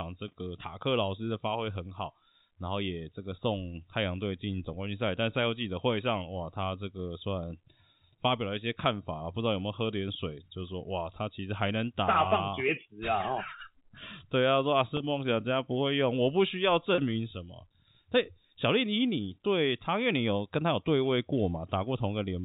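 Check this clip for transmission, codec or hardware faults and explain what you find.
Two short dropouts are bridged by packet loss concealment, in the form of packet loss with pitch repetition, at 14.97 to 15.00 s and again at 16.95 to 16.98 s. Each gap lasts 30 ms, which fits three 10 ms packets going missing. The receiver fills each hole by replaying the last pitch period of the speech. At this length the patch is brief, heard as a slightly held, buzzy sustain before the speech resumes. The 4 kHz ceiling of G.711 telephone coding applies throughout.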